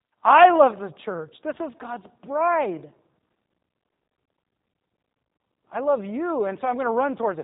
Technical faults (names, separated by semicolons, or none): G.729 codec